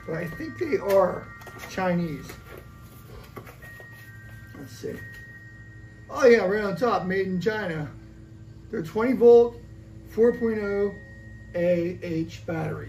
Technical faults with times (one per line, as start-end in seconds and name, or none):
none